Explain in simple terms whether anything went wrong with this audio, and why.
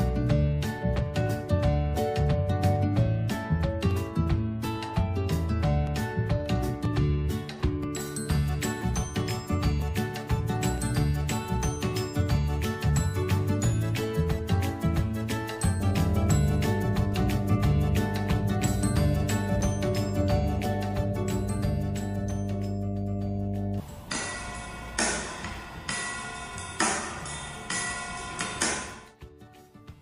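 From 15.80 to 23.80 s a steady 50 Hz mains hum, roughly as loud as the sound itself, comes in, caused by power-line interference such as a ground loop.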